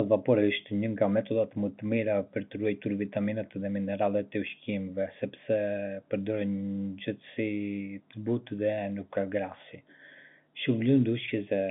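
Ordinary telephone-band speech; nothing here is technically wrong.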